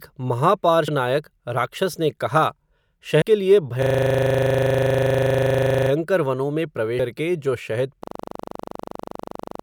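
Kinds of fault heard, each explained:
Compressed frames skipped: Whole 32 ms frames are missing, so the speech jumps ahead about 100 ms at 0.88 s and about 150 ms at 3.22 s, just before "के लिए", and at 6.99 s.
System hang loop: A single 40 ms piece of audio repeats exactly, giving a rattling buzz at 25 Hz. It runs from 3.82 to 5.90 s, between "के लिए" and "वनों में", where speech resumes without a jump. After "जो शहद" it starts again at 8.04 s and lasts to the end. The sound repeats instead of skipping forward.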